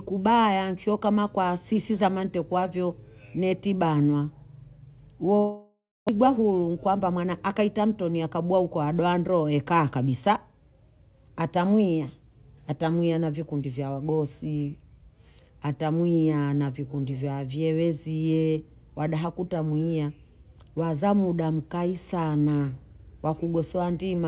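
At 5.36 s the speech breaks off into a buzzy continuation of the last sound that fades away to near silence, and the talker picks up again at 6.11 s with part of the sentence missing. This is a long network dropout, likely caused by packets that stopped arriving for around 0.6 s. The receiver filled about 0.73 s by drawing out what it last had, and the final 0.27 s of that fill had already decayed to silence.

Straight after, from 6.19 s to 7.23 s, the speech sounds rushed while its pitch stays the same, running at about 109% of normal speed. This is a jitter buffer speed-up. The late audio arrived in a bunch and left the buffer holding roughly a tenth of a second more than it aims for. The receiver worked that excess off by cutting out short pitch-period slices again and again. Throughout the clip nothing is heard above 4 kHz, which fits the narrowband G.711 call codec.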